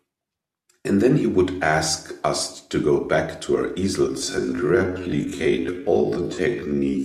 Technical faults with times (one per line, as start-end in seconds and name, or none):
4.05-7.05 time-stretched section